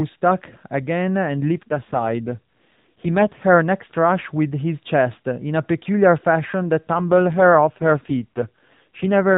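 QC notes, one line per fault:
1.37–3.43 s and 6.92 s to the end: AMR rate drop. The narrowband speech, already capped at 4 kHz by the mobile codec, turns buzzier and more synthetic with no gap or band change. That fits the codec falling from 12.2 to 5.9 kbps.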